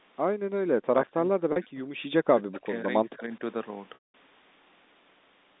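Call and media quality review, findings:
Speech suppressed in double talk: talker is turned down, roughly 40 dB, at 0.67–1.94 s (about a second affected), 2.45–2.88 s and 3.06–3.41 s. Likely echo canceller suppression during simultaneous talk, attenuating near-end speech along with echo.

Packet loss with pitch repetition: brief held, buzzy tone at 1.52 s (40 ms), then a longer gap at 3.94–4.14 s (200 ms) that fades to silence and cross-fades back. Receiver concealment repeats the last pitch period; losses fit two and ten 20 ms packets.

Echo leak: delayed copy of the talker at 2.38–2.57 s, about 15 dB below the speech and about 175 ms late. Likely residual loudspeaker echo that the far-end canceller failed to remove and that was sent back into the call.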